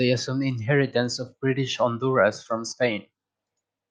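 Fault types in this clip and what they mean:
No fault types are present in this clip, so there is nothing to explain.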